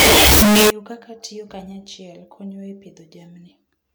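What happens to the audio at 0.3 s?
At 0.3 s the speech is buried in very loud, harsh distortion from 0.0 to 0.70 s, ending before "kaka tiyo kanyachiel konyo". The likely cause is a signed and unsigned mix-up in the 16-bit samples, which flips the top bit so every zero crossing jumps across the full range. Unlike ordinary clipping, even quiet moments blare as loudly as the rest.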